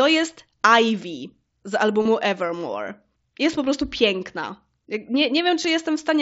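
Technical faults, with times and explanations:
2.02–2.05 s and 5.63 s, concealed Bluetooth headset packet loss: headset packets dropped and the phone filled the gaps by repeating the best-matching recent stretch of waveform. The 30 ms run at 2.02 s gives a short buzzy hold and a slight warble on recovery, while the brief 15 ms one at 5.63 s gives an even shorter buzzy hold under the wideband mSBC sound.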